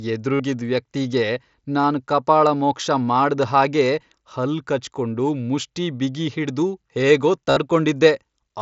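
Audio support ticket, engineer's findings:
Brief buzzy held tone, slight warble on recovery, at 0.35–0.40 s (about 52 ms), 1.82 s before "ಕಪಾಳಮೋಕ್ಷ ಮಾಡ್ದ್ ಹಾಗೆ ಹಲ್ಲ್", and 7.50–7.57 s after "ಕಚ್ಕೊಂಡು ಮುಷ್ಠಿ ಬಿಗಿಹಿಡ್ದು ಹೇಗೋ" (60 ms). Concealed Bluetooth headset packet loss: dropped frames patched by repeating recent waveform. Wideband mSBC link passes speech to 8 kHz.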